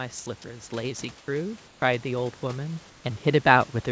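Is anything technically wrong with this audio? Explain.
Yes, there are two faults. From 0.43 to 3.77 s, automatic gain rising: the gain control judged the input too quiet and raised it by about 11 dB, so speech and room noise swell together. In the gaps at 1.18 to 1.28 s, 1.68 to 1.82 s and 2.90 to 3.04 s, the real background gives way to comfort noise in place of the background, likely because transmission stopped during silence and the receiver filled in synthetic noise. The result is a flat, featureless hiss about 2 to 5 dB quieter than the room.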